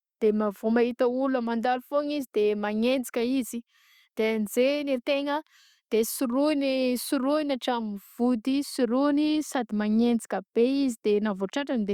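Nothing stood out on listening to this speech recording.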